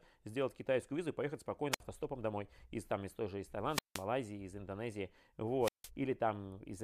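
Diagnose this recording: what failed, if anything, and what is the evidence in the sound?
The wireless link failed, with wireless microphone squelch dropout at 1.71 to 1.81 s (after "китайскую визу и поехать"), 3.68 to 4.06 s (after "из той же из") and 5.61 to 5.90 s. The fading FM signal raises hiss, then squelch mutes for 59, 169 and 162 ms, leaving flat gaps in the waveform and blank spectrogram columns preceded by broadband noise.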